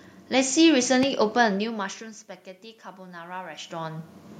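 At 1.03 to 1.05 s a single loud pop sits on top of the speech, peaking roughly ten decibels above it, while the speech carries on underneath. That continuity and its lone, thumping character set it apart from a dropout or crackle; a voltage spike from a switch or static discharge is the likely cause.

From 2.96 to 4.18 s automatic gain rising is heard. The input has fallen by about 21 dB, and the gain control slowly lifts its gain by about 5 dB. Speech and room noise swell together, unlike a talker moving closer, where only the voice would grow.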